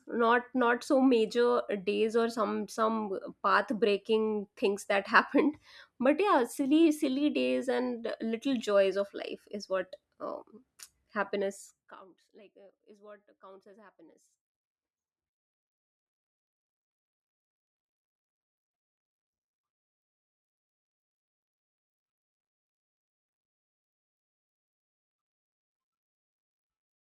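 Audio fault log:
11.42 to 12.13 s, zipper noise: the level drops by roughly 25 dB over about 0.7 s, just before "like uh is what", but it moves in discrete jumps at around 70 steps a second rather than as a continuous slope. Each jump is an abrupt gain discontinuity in the waveform, so the fade carries a fast ticking, zipping texture.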